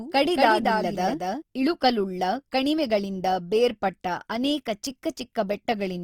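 A speech recording shows two faults. Throughout, the audio has likely passed through Opus compression in its music (CELT) mode at a low rate, consistent with roughly 24 kbps. The encoder keeps each band's energy but lacks bits for fine detail, so it fills bands with folded or noisy content. Speech comes out rough and grainy rather than swirly, with plainly audible damage, though the full bandwidth survives up to about 20.3 kHz. From the start until 1.42 s, a doubled audio track is present, with a second copy of the same sound mixed in already under way. It trails the original by about a fifth of a second at roughly 5 dB quieter, full-band and dry with no room tail. It gives a clean, slap-like echo that stops abruptly at 1.42 s.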